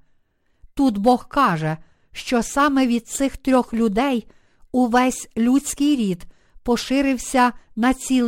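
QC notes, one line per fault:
Throughout: crude rate conversion. A gritty, inharmonic fizz rides on the speech, strongest on loud and sibilant sounds. It fits a 48 kHz to 44.1 kHz change done by simply dropping the nearest samples, with no filtering. The dropped samples fall in a fixed repeating pattern, so the error, roughly 30 dB below the speech, forms tones unrelated to the voice's harmonics. Codec artefacts would swirl or smear instead, and this fizz follows the signal level closely.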